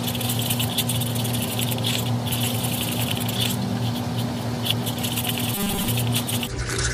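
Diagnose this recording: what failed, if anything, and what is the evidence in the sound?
Robotic sound from repeated short buffers appears between 5.55 and 5.88 s, where the sound collapses into a rigid, metallic 200 Hz buzz that loosely tracks the original contour. A 200 Hz buzz fits a 5 ms chunk being replayed over and over, and repeats make up most of that third of a second. The likely cause is starvation at the driver or buffer stage: fresh audio arrived late, so the last short block was looped while real material was skipped.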